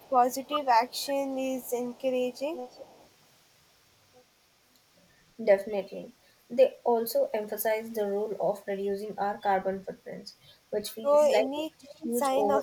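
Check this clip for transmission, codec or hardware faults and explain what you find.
Two faults are audible: echo leak and speech suppressed in double talk.

Echo leak, from 0.0 to 1.07 s, 1.61 to 3.09 s, and in brief scraps at 11.56 to 11.63, 12.0 to 12.07 and 12.51 to 12.62 s: a faint copy of the speech returns about 0.35 s late, roughly 10 to 20 dB down. The cause is likely a far-end loudspeaker path the echo canceller didn't fully cancel. On a spectrogram, harmonic patterns repeat as weaker, shifted ghosts.

Speech suppressed in double talk, briefly at 1.27 to 1.35 s and heavily at 11.43 to 12.1 s: the speech dips by roughly 15 dB in the short instance and about 30 dB across the longer 0.7 s stretch. This likely happened because the canceller mistook overlapping talk for echo and attenuated everything. The waveform envelope sags abruptly.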